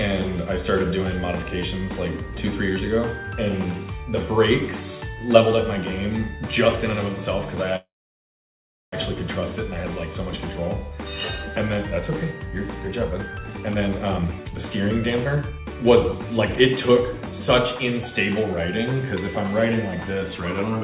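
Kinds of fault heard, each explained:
Call audio freeze: From 7.76 to 8.95 s the sound stops for about 1.2 s, mostly in silence, likely because delayed packets emptied the jitter buffer. Unlike a dropout, nothing is lost. The audio resumes exactly where it halted, only later.
Jitter buffer speed-up: From 13.1 to 17.8 s the sound runs at 125% speed, with roughly a second trimmed out in small pitch-period slices. The pitch stays put, which separates this from a resampling speed change, where everything would also rise in pitch.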